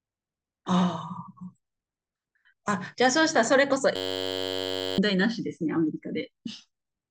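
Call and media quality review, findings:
System hang loop, 3.96 to 4.98 s: speech drops into a steady buzz around 94 Hz. Driver or host froze while the audio hardware kept replaying one 10.67 ms ring-buffer chunk, consistent with a 512-sample buffer. About a second of speech is lost.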